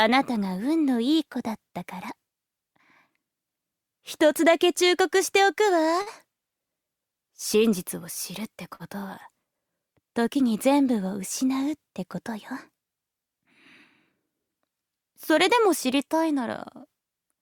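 At 6.01 and 8.75 s there's a short stall from a late packet: the jitter buffer ran dry, so the sound gets held about 45–50 ms with a slight buzz or dip, then carries on.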